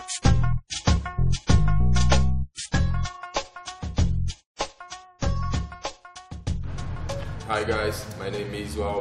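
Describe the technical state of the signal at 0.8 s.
At 0.8 s the player is still on its opening low-bitrate rendition, an adaptive stream starting at a low bitrate, before stepping up at 6.0 s. The sound suggests a 32 kbit/s MP3 tier: nothing above about 10.2 kHz, dull treble, and stronger codec artefacts.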